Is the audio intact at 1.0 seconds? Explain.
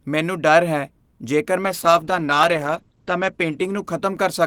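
Yes, the speech at 1.0 seconds is intact, with no dropout, click, distortion or other fault at that moment.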